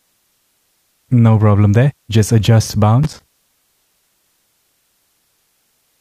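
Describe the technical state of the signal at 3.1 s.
Loose connector crackle is audible at 3.1 s, within a burst running from about 3.03 to 3.46 s. A worn or dirty contact somewhere in the signal path is intermittently losing and regaining connection as it shifts, so the audio is chopped on and off in rapid, uneven bursts, and any DC offset on the line adds sharp pops at each make and break. The result is an irregular scratchy crackle lasting roughly 0.4 s.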